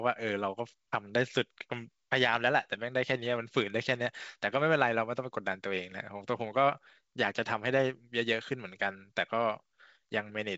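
No technical faults can be heard in this speech.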